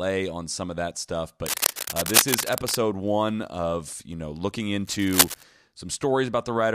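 Cable scratch noise hits from 1.46 to 2.75 s, after "some of that stuff", then again at 4.85–5.43 s, after "of you know looking", rustling bursts roughly level with the speech, then a bit louder. It's likely a worn cable or connector being moved.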